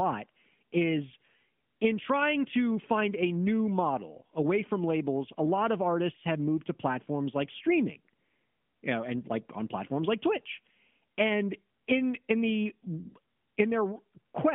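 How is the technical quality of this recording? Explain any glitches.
Nothing stood out as a glitch or technical problem on listening to this recording.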